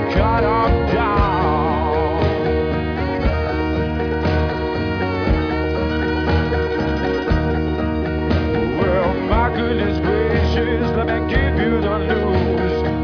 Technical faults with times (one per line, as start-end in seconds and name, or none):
none